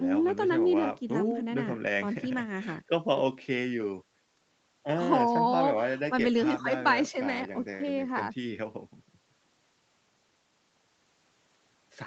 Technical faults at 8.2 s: none

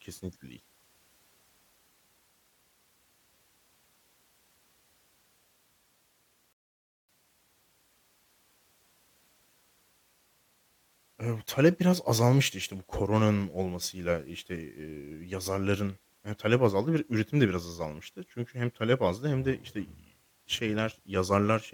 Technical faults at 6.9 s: rebuffering stall

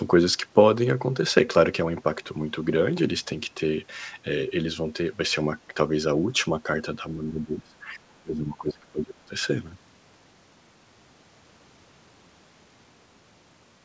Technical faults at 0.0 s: none

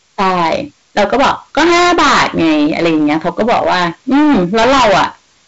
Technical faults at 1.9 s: hard clipping

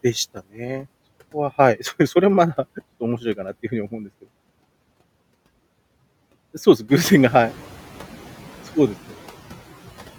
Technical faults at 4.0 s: noise suppressor artifacts

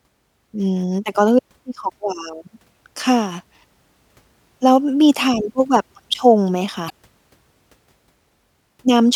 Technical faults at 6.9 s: damaged data in a compressed stream

